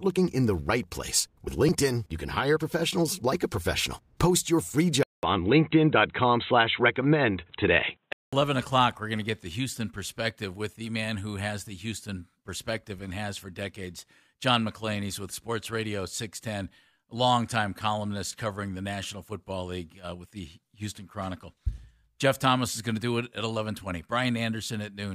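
At 5.03 s, after "your free", the input likely switched to a poorer device: a 200 ms gap, then boxy sound with nothing above 4 kHz until 8.33 s.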